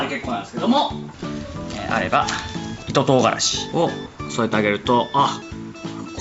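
No faults detected; the audio carries nothing above 8 kHz, which is consistent with the normal band limit of the call microphone processing and the WebRTC call path.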